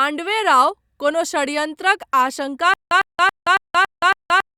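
From 2.74 s to the end, the speech breaks into a stutter with silent gaps: a 103.5 ms fragment repeats six times every 278 ms, separated by 174 ms of silence, likely a stalled stream replaying its last buffer.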